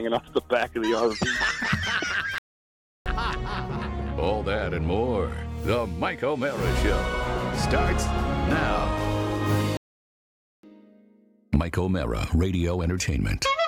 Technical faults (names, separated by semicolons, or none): playback stall